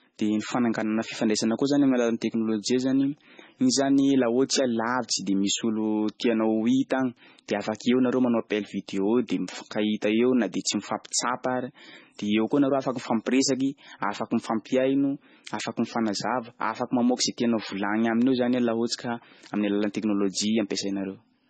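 MP3 compression, throughout the speech: heavy damage that likely comes from an MP3 encoder starved of bits, pointing to a bitrate near 18 kbps. Nothing survives above 9 kHz, so the treble is cut off, and weak frequency lines flicker between frames, giving watery, swirling sibilants and smeared attacks.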